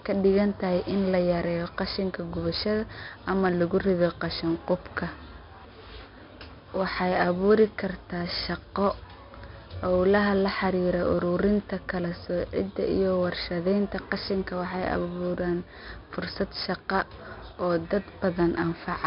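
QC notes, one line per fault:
Throughout, 4-bit ADPCM compression: heavy damage from coarse 4-bit steps adds gritty hiss on loud speech and smears sharp onsets. The spectrogram shows level-following broadband noise and nothing above 5.3 kHz, which fits an 11 kHz sample rate at 44 kbps.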